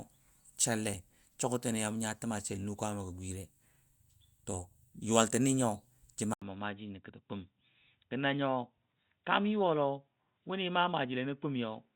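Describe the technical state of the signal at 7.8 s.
At 7.8 s the sound is dull and band-limited, with nothing above 3.8 kHz. From 6.34 s to the end, this is likely an input switched to a poorer device, after an 80 ms gap.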